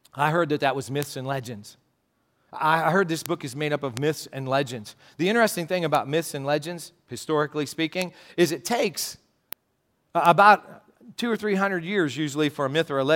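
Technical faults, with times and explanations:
1.03, 3.26, 3.97, 5.95, 8.02, 9.53 and 10.26 s, bit error spikes: isolated sharp broadband ticks peaking near about -1 or about -7 dBFS, unrelated to the speech, as when a single flipped bit throws one to three samples off by a power of two before they return.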